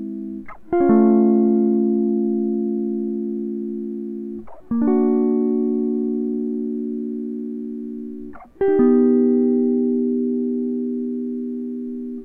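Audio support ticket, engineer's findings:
Listened to the full music clip; nothing stood out and no issue was found to trace to any component.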